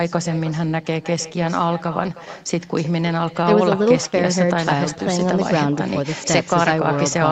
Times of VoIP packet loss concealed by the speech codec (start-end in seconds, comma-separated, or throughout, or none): none